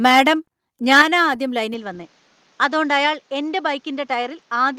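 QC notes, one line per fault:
0.92–1.02 s, microphone overload: the loudest peak here turns harsh and crackly, with a gritty edge laid over it. The likely cause is input gain set too high. The signal tries to go about 4 dB past the converter's ceiling, so the tops of the waveform are sliced flat, and about 7% of the samples in this stretch are clipped at the converter's limit. The squared-off peaks are what produce the raspy distortion.
1.02 s, microphone volume stepped down: right after that distorted peak, everything drops abruptly by about 5 dB, and the background falls along with the voice. It is a single step, not a gradual fade. The likely cause is the call software reacting to the overload by cutting the device's input gain in one move. The timing, immediately after the clipped peak, fits that kind of protective correction.
1.74 s to the end, input switched to a poorer device: from this point the sound goes duller and boxier, as the band narrows. 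The change comes with no gap. Loudness stays roughly the same, but a new noise floor appears, about 35 dB below the voice. This likely comes from the system changing to a different, narrower-band microphone mid-recording, which brings its own tone and background noise.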